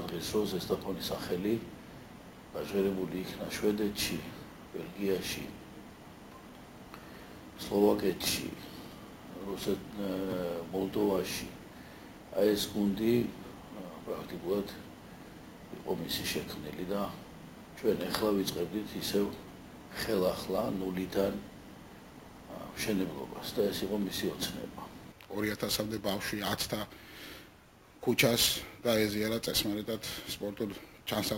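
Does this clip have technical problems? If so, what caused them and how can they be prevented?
Yes. Imaging from sample-and-hold upsampling runs through the whole clip. The rate was raised by holding each sample, with no smoothing filter. Mirrored copies of the spectrum fold up above the original band. The first sits between 8 kHz and 16 kHz, which fits a 16 kHz source. It is about 16 dB below the signal. It is heard as a metallic fizz that tracks the sound's level. Prevent it by resampling with a proper interpolating low-pass filter.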